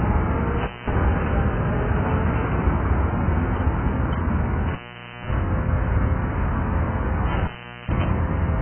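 Throughout, the sound is dull and smeared with a fizzy, warbling texture, and nothing survives above 3.1 kHz, likely from heavy AAC compression at a very low rate, around 8 kbps. A spectrogram shows a hard ceiling at 3.1 kHz with patchy, blotchy holes below it.

An intermittent contact then breaks the signal three times: from 0.61 to 0.92 s (open for 0.21 s), 4.68 to 5.35 s (0.53 s) and 7.32 to 8.04 s (0.41 s). Each time the sound cuts out with crackle at the edges and faint hiss in the gap. The waveform collapses to a thin noise floor between sharp spikes.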